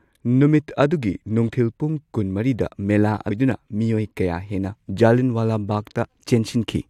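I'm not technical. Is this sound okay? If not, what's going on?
No. At about 3.30 seconds the speech suddenly jumps forward, with a tiny blip at the join. A stretch of the talking is simply missing, so the sound lurches ahead rather than flowing on. This is a stream segment skipped. The cause is likely that the audio was sent in small chunks, one chunk failed to arrive, and the player carried on with the next piece. You can't get back what was dropped.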